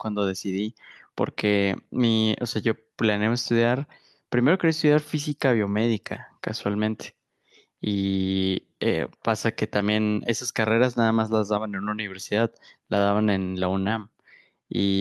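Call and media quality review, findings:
No findings: the call and media quality review turned up no faults in this speech audio.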